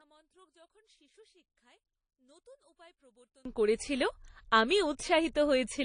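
Speech, with a dull, smeary top end that stops near 9.8 kHz and layered swirly artefacts throughout, likely from transcoding between lossy codecs, consistent with low-bitrate MP3 re-encoded to AAC. From 0.0 to 3.45 s, just before "করেছিল আমি", the mono sum nearly vanishes, dropping about 33 dB, likely because one channel is inverted, so the centred voice cancels.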